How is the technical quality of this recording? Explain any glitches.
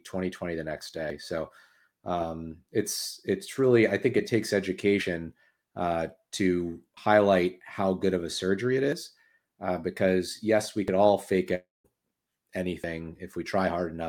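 The recording has two kinds of glitch: short skips recurring through the speech, and one longer gap near the end.

Audio missing between chunks, at 1.10 s (just after "twenty the next"), 6.97 s, 8.93 s, 10.88 s (between "uh because yes we" and "all fake") and 12.84 s. The spacing of roughly 2 s likely points to the audio being handled in 2 s blocks, with a small slice, a few tens of milliseconds, lost at each handover. The two sides are butted together, so each is heard as a brief jump in the speech.

Long network dropout, from 11.55 to 11.86 s, right after "all fake". About 300 ms of audio never arrived, likely from a network interruption. The receiver filled the gap by stretching the last sound into a fading buzz, which trailed off into close to 190 ms of near-silence. The speech resumes afterward without the lost portion.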